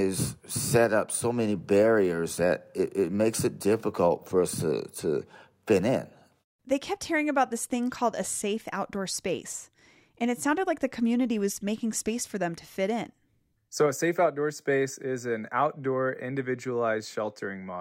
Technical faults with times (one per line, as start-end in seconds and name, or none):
none